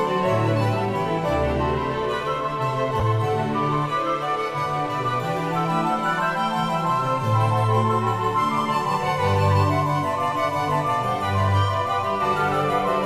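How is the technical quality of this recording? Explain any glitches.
One brief glitch stands out. At about 3.00 s there is damaged data in a compressed stream. Part of the encoded data there was corrupted. The decoder misread the frame and lost sync until the next frame header. It comes through as a short glitch in the sound.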